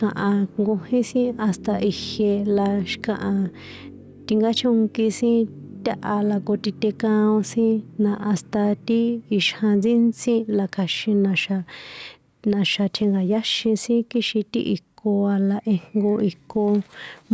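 Throughout the recording, loud and quiet syllables sit unnaturally close in level. This is gain pumping, and the likely cause is microphone gain set far too high, with a fast limiter or compressor clamping down on each loud peak and releasing in the gaps, swinging the level by about 5 dB. The call microphone processing behind it keeps everything below 8 kHz.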